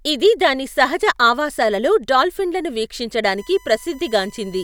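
Current drawn by the USB bus in 1 ms frames is leaking into the audio through the power or ground, producing USB whine from 3.38 s to the end: a steady 1 kHz tone sitting roughly 30 dB below the speech.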